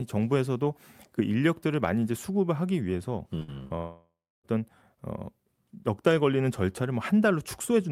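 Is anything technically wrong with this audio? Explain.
Yes. The speech breaks up repeatedly between about 3.39 and 4.46 s, in a pattern typical of a call losing packets on its way to the receiver.

There are two short concealed packet losses, at 3.39–3.43 s and 3.68–3.72 s. In each, a few hundredths of a second failed to arrive, and the decoder covered the hole by extending the preceding sound for about 13 and 20 ms, then blending back in. About 20 ms of real speech is skipped each time. Each one is heard as a small smear or wobble. On a spectrogram the sound runs briefly flat and smooth instead of moving. The waveform shows a slight seam where the filled sound rejoins the real signal.

A burst of packet loss follows the first of these immediately, at 3.43–3.50 s. Several consecutive packets went missing, and the receiver held the last sound for about 50 ms while turning it down. The result is a short held sound that fades before the speech resumes, with about 40 ms of content gone. 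On a spectrogram it looks like a frozen, dimming band. In the waveform the amplitude tapers into a short dip.

The long network dropout at 3.78–4.46 s is the biggest break. It is likely caused by nothing arriving from the network for roughly two thirds of a second. The last sound is stretched into a fading buzz or hiss, then about 300 ms of silence follows before the speech picks up further along. Roughly 660 ms of content never plays. On a spectrogram this appears as a smeared, darkening block ending in an empty gap. The waveform decays to a flat line.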